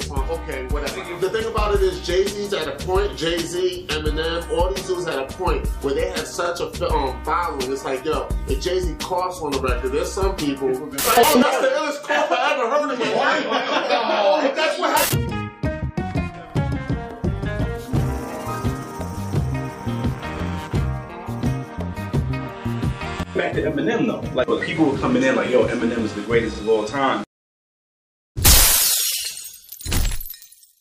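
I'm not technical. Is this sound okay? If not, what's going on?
No. Overlapping chunks cause a brief stutter at 6.45 s and again at 16.50 s. The sound was handled in 10-second pieces, and each piece began slightly before the previous one finished, so about 48 ms of audio plays twice at each join.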